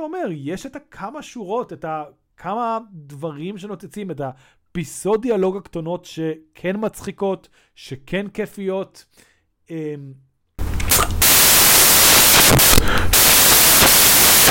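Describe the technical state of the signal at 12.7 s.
At 12.7 s the speech sits inside a stretch of samples built from the wrong bytes, running from 10.59 s to the end. Misassembled bytes push the low bits into each sample's high-order part, producing loud, harsh broadband noise, close to white on the louder speech.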